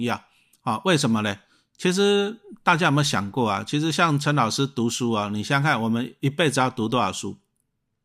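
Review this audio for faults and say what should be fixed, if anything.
No faults heard; nothing needs fixing.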